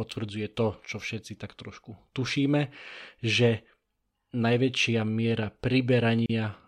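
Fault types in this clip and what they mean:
Gap at a join of encoded pieces: the speech drops into a gap of about 35 ms from 6.26 to 6.30 s, edges smeared, then resumes where it stopped. Separately encoded pieces were joined untrimmed, leaving encoder start delay and last-frame padding in place.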